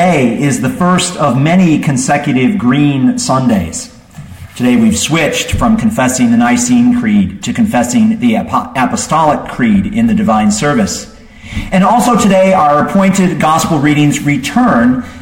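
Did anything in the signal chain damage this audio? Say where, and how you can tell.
No, nothing in the chain audibly damages this recording: there are no dropouts, clicks, distortion, level jumps or other signs of trouble at any stage between capture and playback.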